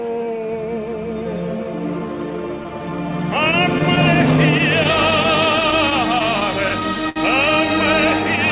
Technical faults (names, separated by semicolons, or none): clock drift between sender and receiver; repeated timing corrections; scattered short gaps